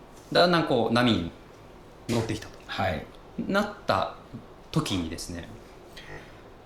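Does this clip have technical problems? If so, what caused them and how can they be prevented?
Yes, there are repeated frames. A short run of compressed frames was written or sent more than once, so the decoder played the same slice of audio again. Near 0.37 s a 20 ms block plays twice more, adding 40 ms. Near 2.13 s a 30 ms block repeats once, adding 30 ms. Near 6.09 s a 20 ms block plays four extra times, adding 80 ms. Each one is heard as a brief stutter. To prevent this, check sequence numbers or timestamps at the writer and the receiver so duplicate frames are dropped before decoding.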